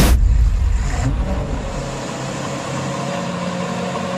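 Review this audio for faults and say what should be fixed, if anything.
No faults were heard, so nothing needs fixing.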